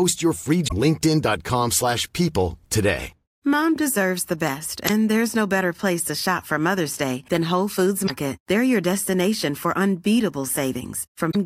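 Brief glitches break through the speech at 0.64–0.72 s just after "your free", at 4.85–4.90 s just before "there's no better place", at 8.03–8.10 s, and at 11.27–11.36 s. They come from damaged data in the compressed stream: the decoder misreads corrupted frames and loses sync.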